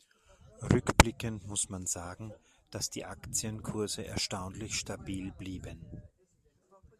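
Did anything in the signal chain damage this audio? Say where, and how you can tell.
No, nothing stood out on listening that would point to damage at any stage of the signal chain.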